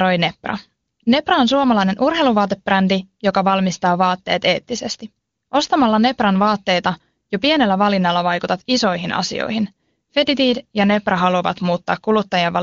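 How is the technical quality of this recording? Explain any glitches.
The technical quality of this speech recording is good, with no glitches to explain.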